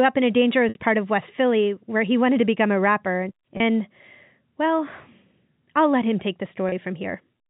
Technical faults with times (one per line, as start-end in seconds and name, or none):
0.69-0.75 packet loss with pitch repetition
3.57-3.60 packet loss with pitch repetition
6.69-6.72 packet loss with pitch repetition